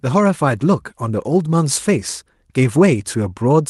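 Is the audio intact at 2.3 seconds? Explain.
Yes, the speech at 2.3 seconds is intact, with no fault at that moment beyond the ordinary coding character of the Opus call path it travelled through.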